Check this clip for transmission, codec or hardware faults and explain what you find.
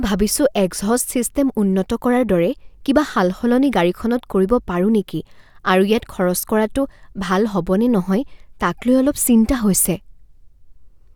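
No transmission, codec or hardware faults turn up anywhere in this speech recording. Nothing in it points to a problem with how the audio was sent, encoded or captured.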